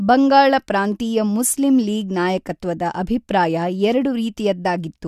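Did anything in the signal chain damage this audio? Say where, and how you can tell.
No, nothing in the signal chain audibly damages this speech recording; the level, continuity and tonal balance hold steady throughout.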